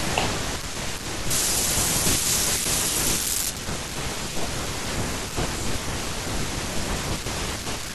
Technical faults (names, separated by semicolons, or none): pre-emphasis left on